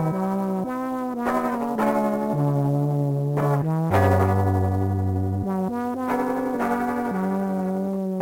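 Sample clock jitter runs through the whole music clip. The converter's clock wanders by something like ten microseconds, so each sample is captured a little early or late at random. The resulting error tracks the waveform's slope: steep, loud and bright passages pick up a grainy hiss sitting roughly 30 dB under the music, while quiet stretches stay clean. The roughness therefore swells and fades with the material rather than forming a steady noise floor.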